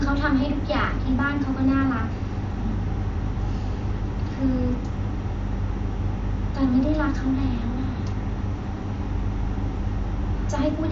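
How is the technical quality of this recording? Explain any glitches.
No glitches turn up anywhere in this speech recording. It comes through the Bluetooth mSBC headset codec, so the audio stops at about 7.6 kHz and carries a faint grainy edge on louder sounds.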